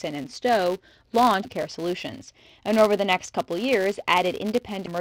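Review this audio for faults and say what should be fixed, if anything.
Filter restarted on every block, throughout: the filter state resets at each block boundary, so a transient starts every block, producing a 200 Hz buzz that tracks the speech level. Prevent it by carrying the filter's state across blocks instead of reinitialising it.

Damaged data in a compressed stream, 4.82 to 4.88 s: corrupted frames make the decoder lose sync and hunt for the next header, giving a brief disruption. Prevent it by checking stream integrity in transfer and storage, and keeping metadata out of the audio payload.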